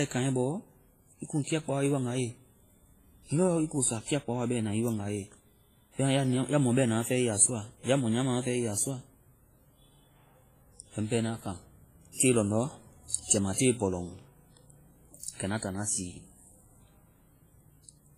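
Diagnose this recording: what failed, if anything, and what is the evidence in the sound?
The speech sounds washy and ringing throughout, with hiss breathing alongside it and nothing above 15.4 kHz. This is likely heavy WMA compression at the codec stage, fitting roughly 24 kbps.

Pre-echo appears at 13.24 to 13.30 s and 13.54 to 13.58 s, where hiss leads the attacks by 57 and 41 ms. The codec spread its quantisation noise across the whole block.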